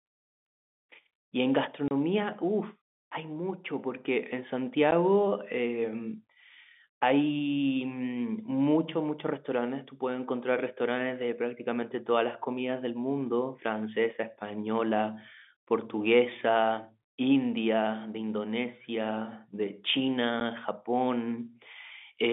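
Telephone-band speech, passed through G.711 coding with nothing heard above about 3.6 kHz, has packet loss filled with silence: abrupt gaps at 1.88–1.91 s (30 ms), 4.91 s and 20.40 s, whose lengths fit 10 ms packets replaced by silence at the receiver.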